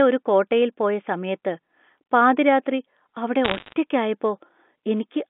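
A speech clip on a G.711 telephone line, where bit errors on the digital phone line add sharp ticking crackle from 3.45 to 3.73 s, just after "പാതിരാത്രി അവിടെ". Around one bit in a hundred is flipped, and the speech underneath stays intact, unlike the gaps left by packet loss.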